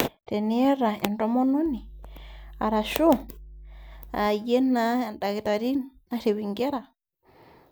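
From 1.66 s to 4.26 s a steady 50 Hz mains hum sits under the speech, roughly 20 dB below it, from power-line interference via a ground loop or transformer. Its fixed pitch and constant level set it apart from rumble or wind noise, which wander.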